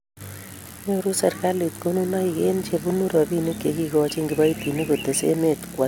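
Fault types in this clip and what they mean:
Generation loss: swirly, hollow speech with blurred attacks and nothing above 17.4 kHz, more smeared than a single AAC encode explains, likely from about three successive passes.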